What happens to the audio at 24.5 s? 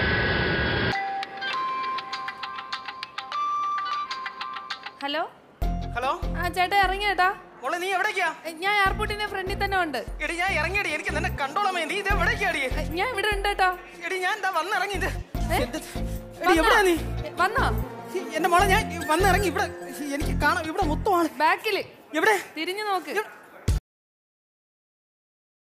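A cut-off end begins at 23.78 s, so at 24.5 s there is nothing but digital silence, which lasts to the end of the clip at about 25.6 s. The final stretch of audio was never written out or played, so the sound stops abruptly in the middle of whatever was sounding. There is no fade or natural decay: the signal drops straight into silence and stays there.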